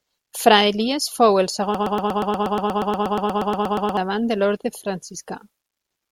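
After "fou el", from 1.75 s to 3.97 s, a broken-record loop: a 0.12 s fragment repeats exactly, back to back, 19 times, giving a rapid stutter until "de l'orde" resumes. The likely cause is a stalled player or stream resending its last buffer, so the intervening speech is lost.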